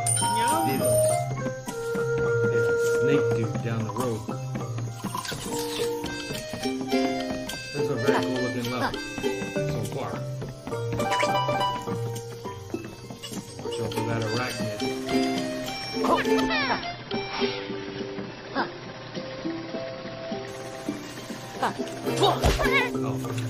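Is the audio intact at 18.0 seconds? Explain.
No. At 18.0 seconds the audio is inside a stretch of adaptive stream at a lower bitrate, from 16.48 to 20.48 s. The stream switched without a gap to a much lower-bitrate version. Nothing remains above 5.8 kHz, so the treble vanishes and codec artefacts rise.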